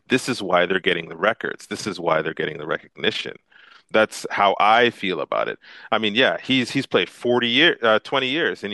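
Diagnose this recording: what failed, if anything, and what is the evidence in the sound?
Overlap-add ripple from call processing, 0.68 to 3.95 s. Level flutters about 6 dB, near 30 Hz. Overlapping frame windows don't sum to constant gain.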